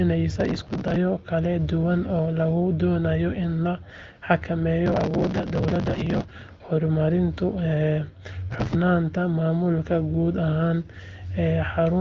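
Processor overload crackle appears at 0.36–0.96 s, 4.86–6.31 s and 8.51–8.75 s. The processor repeatedly misses buffers a few milliseconds long, and each one is skipped, so gritty crackling tears through the speech. On a waveform it shows as dense tiny gaps; on a spectrogram, packed vertical broadband streaks.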